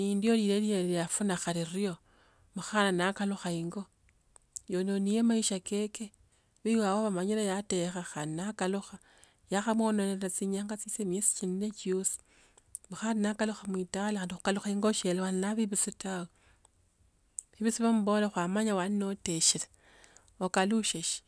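No technical faults can be heard anywhere in the speech recording, and the signal stays intact and continuous throughout.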